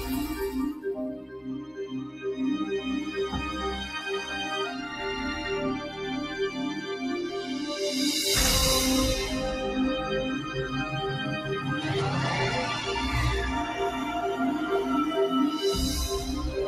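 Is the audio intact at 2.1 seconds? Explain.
No. A noise suppressor meant for speech is running across the whole clip and misreads steady tones, ambience and decay as noise. Level pumps by around 5 dB as held material gets pulled down while attacks pass, giving a fluttering, thinned texture.

At 2.1 s the sound is being cut by the noise suppressor, in an episode from 1.07 to 2.24 s. The suppressor classified this sound as noise and attenuated it by up to about 10 dB, so sustained content sinks and its tail is clipped short.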